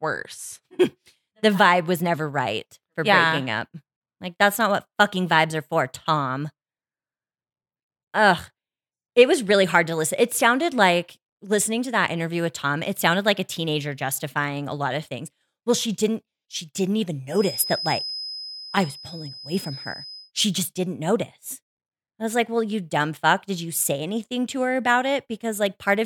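A feedback whistle runs from 17.26 to 20.32 s, starting just after "didn't she didn't even". A thin, steady tone near 5.1 kHz sits roughly 15 dB under the speech and swells and fades slowly in level. It likely comes from a loudspeaker-to-microphone loop held just short of runaway feedback.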